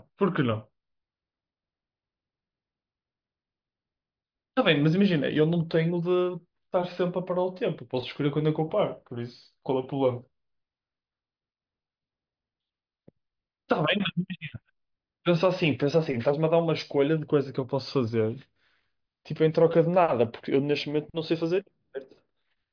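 No technical faults can be heard anywhere in the speech.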